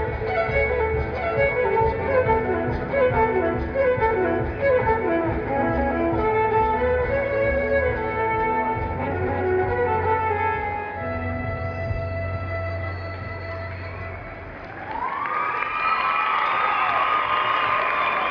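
No technical faults can be heard anywhere in this clip. Nothing in the audio stands out as needing a timestamp or a second listen.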